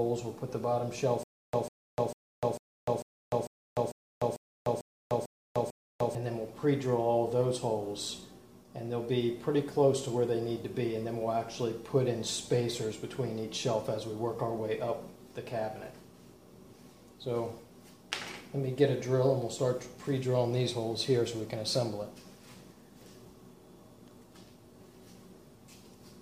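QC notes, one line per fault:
1.23–6.15 s, stutter with silent gaps: a 147 ms fragment plays eleven times at an even 447 ms period, each repeat followed by 300 ms of dead silence, so the same sound repeats and stops in a steady rhythm. The likely cause is a stalled player or stream replaying its last buffered chunk on each retry, and the audio due in that span is lost. The waveform shows identical blocks separated by flat silent gaps. The spectrogram shows repeating identical columns split by empty bands.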